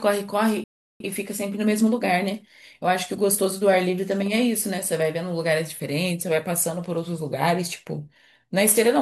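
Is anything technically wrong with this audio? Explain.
Yes. There is a playback stall from 0.64 to 1.00 s: the speech cuts to silence for about 360 ms, likely because the player's buffer ran dry or its thread was blocked. Then comes time-compressed catch-up from 1.00 to 4.00 s, where the player trims its backlog by splicing out and cross-fading short slices. The speech runs about 1.1 times faster at unchanged pitch.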